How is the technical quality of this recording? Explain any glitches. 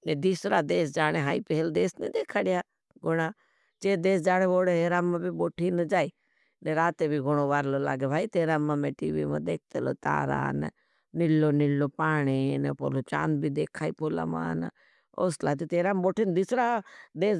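No technical faults are audible anywhere in the recording.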